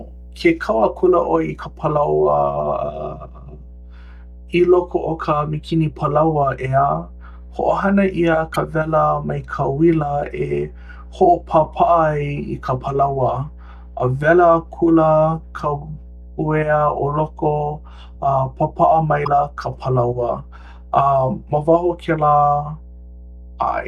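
A steady mains hum sits under the speech from start to finish. It is a low tone at 60 Hz, roughly 20 dB below the speech. A ground loop or nearby transformer has let the power line leak into the signal.

Damaged data in a compressed stream appears at 8.51 to 8.56 s and again at 19.21 to 19.28 s. Each is a brief chirp, squawk, click or short hole. Bad bytes in the stream made the decoder misread frames and lose sync.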